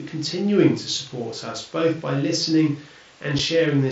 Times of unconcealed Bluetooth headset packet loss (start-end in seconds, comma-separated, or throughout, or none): 3.39